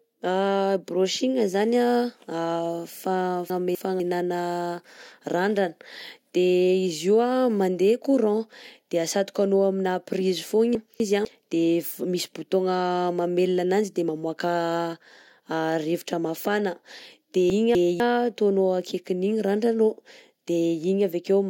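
Chunks out of order at 3.5, 10.75 and 17.5 s: one 250 ms block plays a chunk late, jumbling speech, seen as vertical spectrogram lines.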